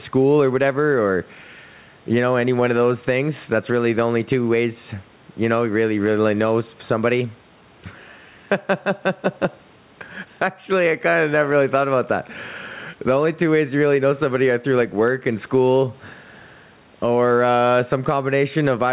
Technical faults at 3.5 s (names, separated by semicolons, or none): gain pumping